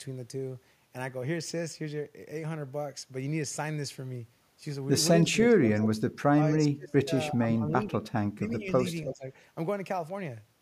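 From 5.23 to 5.89 s, then 6.36 to 6.43, 6.67 to 7.11, 7.3 to 8.12 and 8.34 to 8.7 s, the speech keeps ducking, from a slight dip to nearly gone. That's speech suppressed in double talk, likely the echo canceller clamping down while both ends talked. At 8.9 to 9.13 s an echo leak comes in, a faint copy about 10 dB down and 322 ms late, likely loudspeaker pickup the canceller missed. The suppression returns at 9.04 to 9.28 s.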